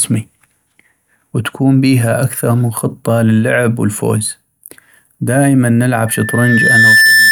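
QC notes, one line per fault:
6.06–7.31 s, loudspeaker feedback squeal: after "دائماً نلعب" the microphone starts picking up its own loudspeaker, and the loop gain passes one at 1.8 kHz. That single tone swells over roughly a second until it sits about 5 dB above the speech, holding as a squeal to the end.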